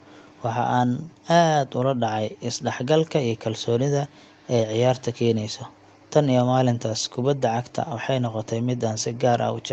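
From 0.34 to 0.44 s a faint, delayed copy of the speech surfaces, trailing the original by 281 ms and sitting far below it. This is likely an echo leak: a loudspeaker on the far side replayed the speech and its echo canceller let a scrap slip back into the microphone. Unlike room reverberation, which smears continuously from the source, this is a distinct repeat at a fixed lag, and brief.

At 5.69 s the background suddenly sinks, by as much as about 40 dB at its deepest, and comes back at 5.99 s, roughly 300 ms later. This is background gated by the echo canceller: while the loudspeaker played, the canceller clamped the microphone hard, muting the room along with any echo. A network dropout would cut everything, including speech, often with clicks. Here it is the ambient bed that vanishes, and it returns once the canceller releases.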